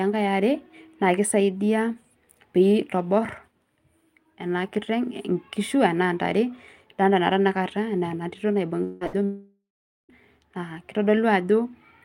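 Speech with network faults. From 8.83 to 9.04 s, about 180 ms is lost, likely a long network dropout, covered by a fading buzz or hiss. A burst of packet loss at 9.07 to 9.16 s drops 60 ms, bridged by a brief fading continuation of the last sound. From 9.25 to 10.12 s, another likely long network dropout loses about 840 ms. The fill fades, leaving roughly half a second of silence before the audio resumes.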